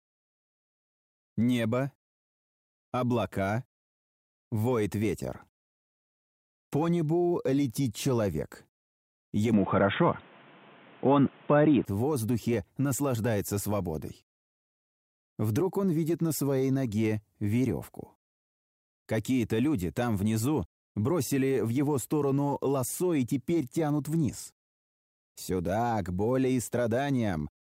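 From 9.54 to 11.85 s the audio goes dull, with nothing above 3.8 kHz, a noticeable level shift and a fresh noise floor, likely the input switched to a poorer device.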